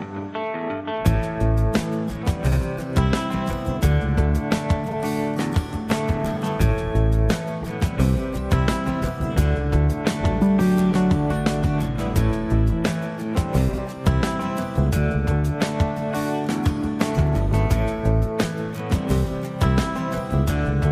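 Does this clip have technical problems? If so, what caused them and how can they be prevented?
Yes. Frames out of order occur at 2.47 to 2.57 s, 4.88 to 4.94 s and 13.68 to 13.79 s. In each, two adjacent blocks of audio were decoded in swapped order, so a brief stretch plays with its halves exchanged. This produces a garbled flutter. The longer two exchange blocks of about 46 ms, and the middle one blocks of about 23 ms. Numbering packets and reordering them in a jitter buffer before decoding prevents this.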